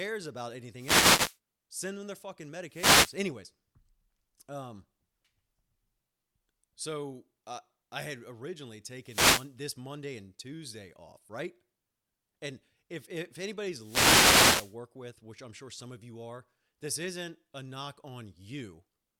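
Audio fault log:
0.75–1.38 s, 2.68–3.20 s, 9.01–9.57 s, 13.78–14.77 s: wireless microphone noise hit. The FM radio link fades as reflected signals cancel, so receiver noise surges and briefly masks the speech as a swish of static lasting roughly half a second to one second.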